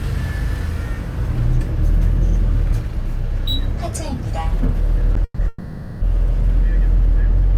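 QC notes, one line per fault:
5.24–5.40 s and 5.48–6.03 s, call audio freeze: The sound stalls twice. The last sound is stretched into a fading buzz, for 140 ms and then 530 ms. The first stall ends in 40 ms of silence. The likely cause is delayed packets draining the jitter buffer. Each time, the audio resumes exactly where it stopped, with nothing lost. The inserted gaps push everything after them later, by 140 ms and then a further 530 ms.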